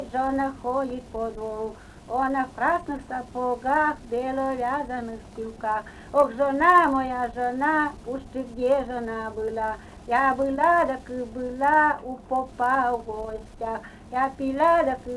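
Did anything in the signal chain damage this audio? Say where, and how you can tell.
Yes. The resampler restarted on every 20 ms block (48 kHz to 24 kHz), so each block edge carries an error, heard throughout as a 50 Hz buzz.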